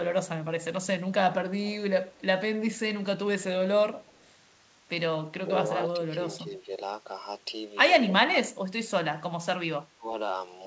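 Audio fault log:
2.13–2.22 s, echo leak: a very faint copy of the voice, 238 ms late and far below it, likely from an echo canceller passing loudspeaker pickup back.
6.37–6.7 s, 8.09–8.63 s, 9.96–10.07 s, speech suppressed in double talk: the voice dips by roughly 10, 25 and 15 dB, likely from the echo canceller attenuating both sides during overlap.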